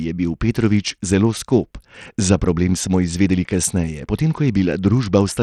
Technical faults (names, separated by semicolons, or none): Bluetooth SBC compression